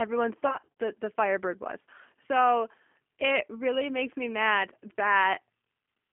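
Speech runs throughout with a slightly rough, synthetic edge and a narrow band of about 250 Hz to 3.4 kHz, the plain damage of a G.729 codec, which fits 8 kbit/s G.729A. From 0.47 to 0.68 s the sound smears into a buzzy tone or coloured noise that fades and stays weak or distorted afterward: VoIP packet loss concealed by the speech codec, with gaps up to 50 ms rebuilt from the previous pitch and filter.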